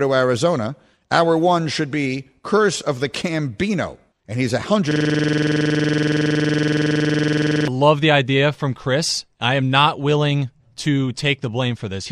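From 4.91 to 7.68 s, the system froze while the hardware kept replaying one 46 ms buffer. This system hang loop makes a 21.5 Hz buzzing stutter before "the idea from".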